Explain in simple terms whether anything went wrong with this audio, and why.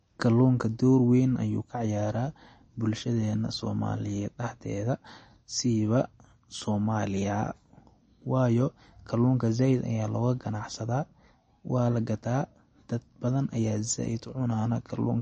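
From start to finish, the speech sounds dull and plainly watery, with a swirly, fluttering quality and a metallic edge on s sounds. Nothing comes through above about 8.3 kHz, so the crisp top end is missing. This is likely MP3 compression squeezed too hard: short of data, the encoder chops off the highest frequencies and drops quieter detail that then flickers in and out from moment to moment, which produces that underwater swirl.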